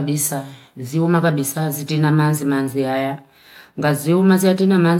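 No faults are audible anywhere in this recording.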